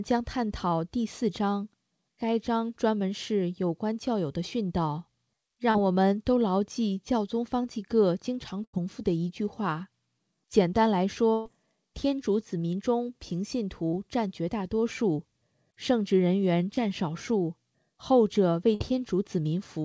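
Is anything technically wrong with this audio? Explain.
Yes, there are dropouts from packet loss on a call link, of two kinds.

Short concealed packet loss shows up three times: 5.71–5.75 s, 13.88–13.94 s and 16.75–16.78 s. Each time roughly 20 to 40 ms of audio never arrived in time, and the receiver papered over the hole by extending the last bit of sound, pitched or noise-like, before crossfading back. You hear a quick smear or wobble, and a brief sound inside that window can simply disappear.

There's also a burst of packet loss at 8.64–8.74 s, 11.33–11.46 s and 18.75–18.81 s. These gaps are longer, about 90, 120 and 60 ms, so the concealment keeps stretching the last sound while fading it down. Depending on what was playing, that gives a held buzz or a decaying hiss, and then the audio jumps back in further along, with the middle chunk gone. The 11.33 s one, at about 120 ms, is the longest.

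The whole thing is band-limited, with nothing above 8 kHz, which fits a wideband call codec along the lines of G.722.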